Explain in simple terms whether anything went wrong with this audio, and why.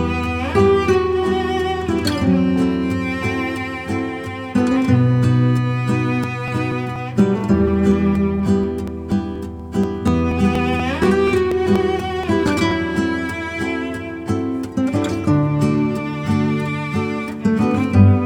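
Periodic USB or driver dropouts run from 6.24 s to 12.71 s. Every 0.24 s, a tiny slice of sound, around 10 milliseconds, goes missing. Across that stretch there are about thirty of these steady ticks, heard only while sound is playing. They happen because something on the computer keeps briefly blocking the USB connection or audio driver on a fixed schedule. Each time, a bit of audio is skipped outright, leaving a small jump.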